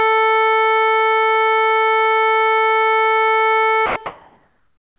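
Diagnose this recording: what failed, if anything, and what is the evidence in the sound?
Sound dropped by the voice detector, 3.86 to 3.96 s, at the call-processing stage: for 100 ms the music gives way to steady synthetic noise before resuming. The likely cause is the sender's voice detector mistaking the music for background and briefly halting transmission.

Comfort noise in place of the background, from 4.06 s to the end: the real background, about 40 dB below the loud parts, becomes a flat, featureless hiss whose level differs by about 8 dB. This is likely discontinuous transmission, with the receiver synthesising noise during the pause. The band-limit at 4 kHz fits a G.711 call codec.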